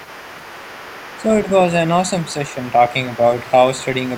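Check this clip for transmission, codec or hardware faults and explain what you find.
Three faults are present: overdone noise removal throughout, the other side's voice leaking through in four places, and speech suppressed in double talk twice.

Overdone noise removal runs the full length of the speech. The noise reduction stage is set too aggressively. Any frequency band that sits close to its noise estimate is pulled down hard or removed, and low-level parts of the voice fall below that line with the noise. The pauses drop to near silence speckled with small twinkling artefacts.

The other side's voice leaking through appears from 0.0 to 1.24 s, from 2.23 to 2.72 s, from 3.13 to 3.18 s and from 3.8 to 3.86 s. A second voice sits faintly underneath, roughly 25 dB below the main speech, as a long stretch at the start, a shorter one mid-clip and two brief scraps near the end. The likely cause is the far-end talker playing out of a loudspeaker at this end, with the echo canceller leaving a residue in the microphone signal.

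Speech suppressed in double talk occurs from 1.17 to 1.48 s, with about 150 ms affected, and from 2.46 to 2.58 s, with about 100 ms affected. Both windows overlap the leakage stretches, where the two voices overlap. The main voice dips by up to about 5 dB in short patches. This is most likely the echo canceller failing to separate the near-end talker from the loudspeaker echo and attenuating everything while both sides are active.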